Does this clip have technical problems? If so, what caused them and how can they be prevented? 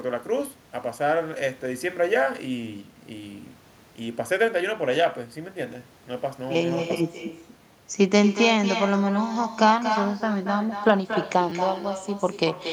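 Yes. Echo with no canceller runs through the whole speech clip. The far end's loudspeaker feeds its microphone, returning the talker's voice about a fifth of a second later at about 10 dB down, thinner. On a spectrogram each syllable's harmonic pattern has a fainter duplicate trailing it. The waveform shows smaller shadow bursts after each burst. Enabling acoustic echo cancellation or using a headset at the far end prevents it.

A repeated buffer occurs from 11.5 to 11.52 s. New audio arrived late, so a 10 ms buffer played two extra times. With so small a buffer, this is heard as a click or brief buzz with hard joins rather than a stutter. The waveform shows identical 10 ms segments back to back, and the spectrogram shows vertical click lines at each join. A deeper jitter buffer with proper loss concealment prevents this.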